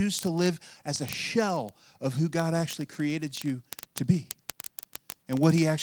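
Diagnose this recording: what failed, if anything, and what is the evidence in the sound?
Word clock ticks on a digital link between devices: from 0.11 s to the end there's a steady rattle of ticks, about fifty a second. The receiver isn't locked to the sender and drifts roughly a thousand ppm, slipping one sample each time.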